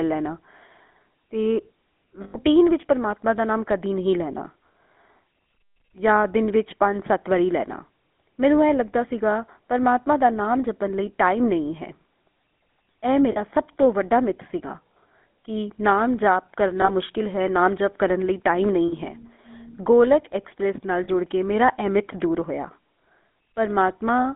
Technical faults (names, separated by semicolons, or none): GSM full-rate codec; lost GSM frames